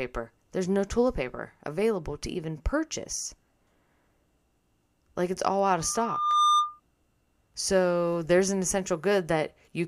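At 5.80 s a loudspeaker feedback squeal begins: the microphone is picking up its own loudspeaker, and the loop gain exceeds unity at 1.2 kHz. That tone swells over most of a second to a few dB above the speech, then stops at 6.80 s.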